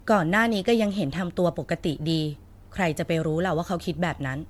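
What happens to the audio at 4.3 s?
At 4.3 s the speech carries the same degradation present across the whole clip: a swirly, hollow, smeared quality, with consonant attacks softened and nothing above about 19.9 kHz. This is likely generation loss from repeated lossy coding, with around seven MP3 passes at a rate that sounds near 99 kbit/s. Each re-encode quantises on a shifted frame grid, so noise and spectral gaps compound beyond what that bitrate alone would produce.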